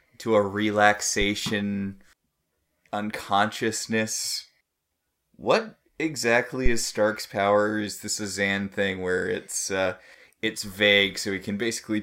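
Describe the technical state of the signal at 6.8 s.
At 6.8 s a phantom power thump is sounding, from 6.66 to 6.88 s. A supply step passes the input's coupling capacitors. It is a deep thump, peaking about -9 dBFS, decaying within 49 ms.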